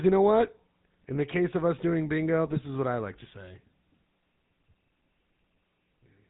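The whole recording carries the sound of the GSM full-rate codec, and the damage is plainly audible. The speech has a buzzy, gravelly edge throughout. The codec rebuilds the voice from a vocal-tract filter driven by regularly spaced pulses. Most of the fine excitation detail is discarded. Nothing above 4 kHz survives, so the top end is gone. The character fits a 13 kbps GSM full-rate stream.

At 0.47 s, just after "you know", GSM bit errors strike. The burst lasts until 0.51 s, about 40 ms. That fits two corrupted frames. Flipped bits garble the decoder's filter, pitch or gain values. The spectrum bends suddenly and a brief squawk breaks through.

The second burst runs from 2.46 to 2.59 s. It falls between "of us doing bingo" and "is what I like". At about 130 ms, it points to around six damaged frames. The error rate is heavier here. The sound breaks into a longer stretch of gargling and pops.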